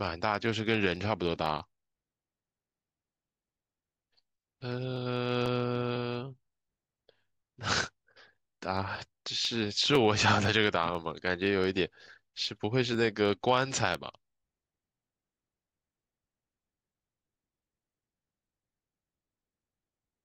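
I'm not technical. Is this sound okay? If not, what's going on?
No. From 0.46 s to 19.94 s there is a tick twice a second, every 0.5 s, heard only while the speech is sounding. These are periodic USB or driver dropouts: something regularly stalls the audio connection, and a tiny slice of sound, well under a millisecond, is skipped each time.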